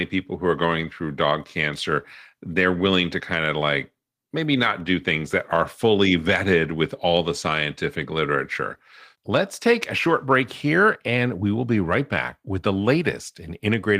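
Nothing stood out on listening to this speech recording.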